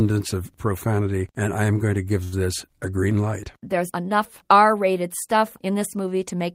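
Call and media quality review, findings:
Short stall from a late packet, 2.23–2.35 s. Speech sound held about 88 ms too long, slight buzz or dip. Jitter buffer underrun: packet arrived late, receiver stretched last audio until arrival, then resumed at the same point. Nothing lost; playout delay increased about 88 ms.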